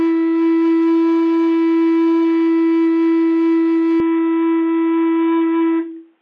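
Music plays with full treble until 4.00 s. From there to the end, the sound turns dull and boxy in an instant. Nothing remains above about 3.8 kHz. There is no gap at the change, and the loudness stays roughly the same. A faint new background noise sits far below the music, around 50 dB down. The sudden narrowing points to an input switched to a poorer device, likely a headset's call profile or a cheaper microphone.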